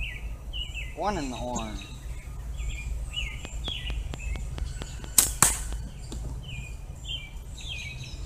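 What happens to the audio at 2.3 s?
Nothing goes wrong at 2.3 s; the audio plays through that moment intact, with no dropout, click or other fault.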